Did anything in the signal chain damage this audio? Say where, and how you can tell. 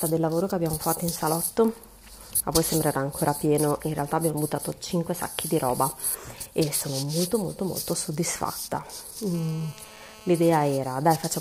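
Yes. A GSM phone buzz enters at the analogue wiring stage, from 9.35 to 10.78 s. It is a hard, raspy tone at 216.7 Hz with a dense stack of harmonics, sitting about 22 dB below the signal. It ignores what the audio is doing and holds steady throughout, which fits a phone on a call. The phone's radio transmits in bursts at that rate, and an analogue input rectifies the pulses into an audible buzz.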